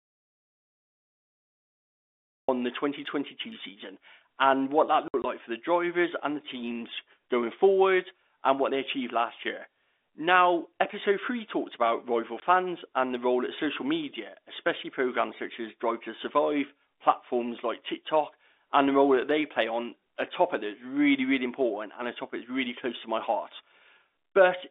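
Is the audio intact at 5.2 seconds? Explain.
No, there's packet loss filled with silence from 5.08 to 5.24 s. About 80 ms of audio drops out across that 160 ms stretch, the longest hole 60 ms, which fits 20 ms packets. The receiver plays dead air in their place, so you hear choppy gaps with hard edges.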